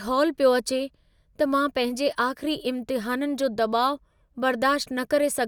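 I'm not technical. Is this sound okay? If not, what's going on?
Yes, nothing in this speech recording sounds wrong. There's nothing here that needs fixing.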